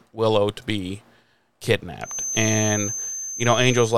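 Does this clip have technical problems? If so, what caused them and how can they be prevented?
Yes. From 2.0 s to the end at 3.98 s, a feedback whistle sits behind the speech: a thin, steady tone at 6.2 kHz, roughly 10 dB below the voice. It is likely caused by loudspeaker output reaching the microphone with enough gain that the loop hovers at the edge of oscillation, sustaining one frequency without building up. It differs from electrical interference tones because its level swells and fades slowly rather than staying fixed, and it is high-pitched rather than a low mains hum. Preventing it means lowering monitor or microphone gain, keeping the microphone out of the loudspeaker's path, or notching 6.2 kHz.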